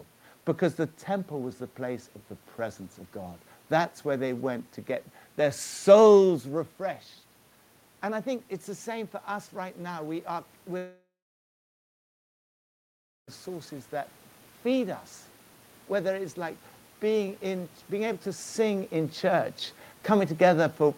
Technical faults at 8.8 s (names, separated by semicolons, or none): automatic gain rising